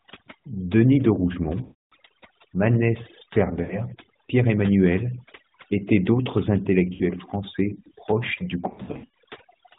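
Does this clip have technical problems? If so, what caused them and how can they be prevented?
Yes, two things stand out.

First, overdone noise removal runs through the whole clip. The noise reducer was pushed too hard, so it's clamping individual frequency bands right down whenever they sit near its noise estimate, and the quieter parts of the voice get dragged down with them. That's why the background drops and breaks up into little twinkly specks. To prevent it, back off the reduction amount and limit how deep the suppression goes, so some natural floor survives.

Second, there are lost AMR speech frames at four spots. Radio errors knocked out frames, and the decoder papered over each gap by reusing the last good pitch and vocal tract settings at falling gain. At 1.62 to 1.93 s about 300 ms goes missing, long enough that the sound smears and fades out. Short dips or warbles come at 3.62 to 3.80 s and 6.94 to 7.02 s. 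From 8.70 to 9.12 s the losses are scattered across about 440 ms, none longer than 80 ms. Underneath all this you can hear fairly light AMR narrowband coding with no content above 4 kHz, which fits the 12.2 kbps mode. To prevent the dropouts, capture over a stable link or record locally instead of through the mobile path.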